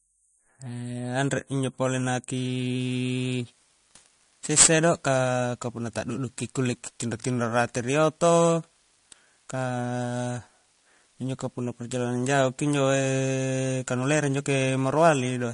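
MP3 compression runs through the whole recording, from 0 s. Nothing is heard above 10.5 kHz, and the speech has a plainly audible watery, swirling quality, with chirpy sibilants and smeared attacks. That is likely the result of a low bitrate, one that fits about 40 kbps, forcing the encoder to cut the treble and let weak frequency lines flicker on and off between frames.

Sample clock jitter starts at 2.37 s and continues to the end at 15.54 s. The converter's timing wobbles by roughly 10 microseconds, so samples land slightly off time. The resulting error sits only about 15 dB below the signal and is heard as a rough hiss that swells on loud, bright speech and disappears in pauses.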